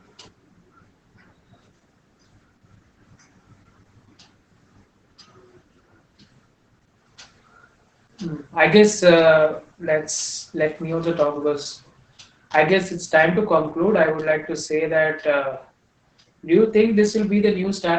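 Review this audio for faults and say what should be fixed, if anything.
Opus voice compression runs through the whole speech clip. Nothing is heard above about 8.7 kHz, and the voice sounds muffled, hoarse and faintly robotic. That fits the SILK linear-prediction coder working at wideband and a bitrate around 10 kbps. At that rate the excitation signal is coded so coarsely that the voice's natural texture turns grainy and synthetic. To prevent it, encode at a noticeably higher Opus bitrate so the excitation keeps its detail.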